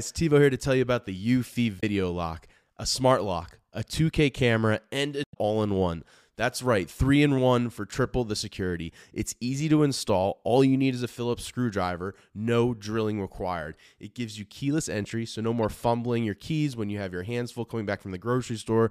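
Three brief garbled blips break into the speech: at 1.77–1.83 s, just before "lock a smart lock"; at 5.21–5.36 s, the longest at about 150 ms, between "camera and a" and "all in one"; and at 15.62–15.65 s, between "keyless entry so no" and "fumbling your keys when". Each is damaged data in the compressed stream. Corrupted bytes make the decoder misread frames and lose sync until it finds the next valid frame header.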